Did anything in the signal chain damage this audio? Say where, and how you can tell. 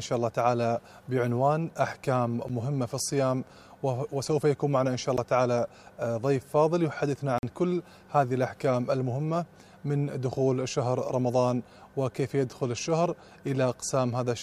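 Yes, at the driver or buffer stage: three blocks of digital silence. Ticks at 2.49 s and 5.17 s, each 11.6 ms, fit a 512-sample buffer that wasn't filled in time, and a 46 ms hole runs from 7.38 to 7.43 s. The sound cuts out and back with no fade.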